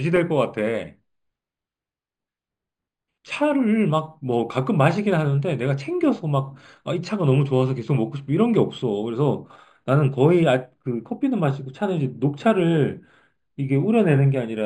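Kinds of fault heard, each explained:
Imaging from linear upsampling: Throughout the speech, the rate was raised by joining samples with straight lines, a weak interpolation filter. The band ends near 5.5 kHz, which points to material first held at about 11 kHz and raised to 48 kHz. The top is dulled, and a faint mirrored copy of the spectrum sits from about 5.5 to 11 kHz, roughly 35 dB down, giving sibilants a light metallic shimmer.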